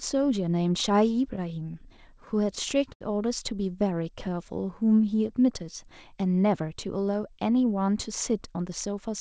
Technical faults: repeated stalls (stutter); jitter buffer slow-down; jitter buffer speed-up

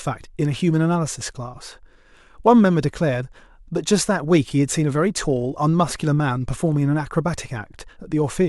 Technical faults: block size mismatch (truncated)

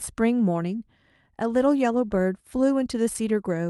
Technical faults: none

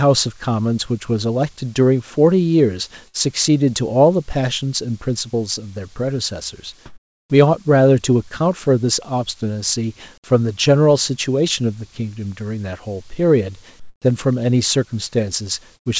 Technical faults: burst of packet loss; comfort noise in place of the background

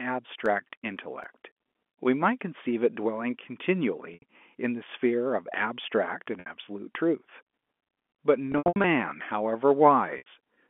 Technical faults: CD scratch ticks; packet loss with pitch repetition

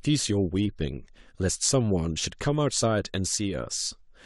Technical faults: none

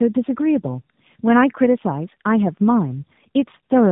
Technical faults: tandem speech coding

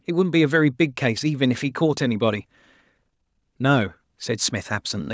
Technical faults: none

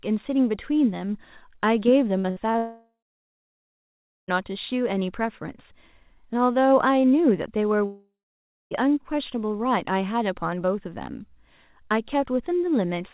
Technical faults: short concealed packet loss; burst of packet loss; long network dropout

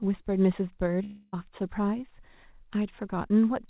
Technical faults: long network dropout

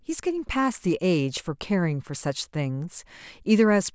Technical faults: none

